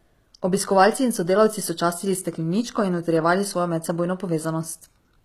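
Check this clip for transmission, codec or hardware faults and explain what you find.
One codec fault runs through the whole speech clip. Throughout, the treble sounds gritty and lispy on s sounds, with nothing above 14.9 kHz. This is likely HE-AAC compression at a low bitrate, around 20 kbps, where spectral band replication rebuilds the highs from copied lower bands.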